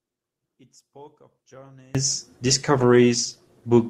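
From the start to 1.95 s the speech is almost gone, about 31 dB down, leaving only a faint trace. This points to one channel inverted, likely one stereo side with reversed polarity, so the centred speech and low end cancel when the channels are summed to mono. On a waveform the envelope collapses to a sliver for that stretch. A spectrogram shows a nearly empty band.

From 2.78 s to the end the speech turns rough and watery, and the top end is dulled. That is a call bitrate drop: the connection's bandwidth estimate fell, which fits an encoder cut from about 32 to 17 kbps. The encoder then codes more coarsely and trims the highs, and the sound stays at its worst for about 1.1 s. A spectrogram shows the upper energy cut off flat, with smeared, blocky detail below it.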